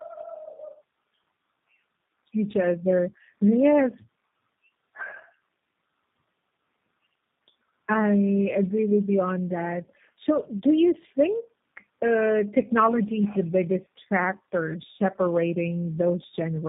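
From start to finish there's tandem speech coding: the audio sounds like it was squeezed through about three low-rate speech codecs in a row, possibly ending in G.729A, each one recoding the previous one's damage. The result is rough, muffled and warbly, with nothing above 3.8 kHz.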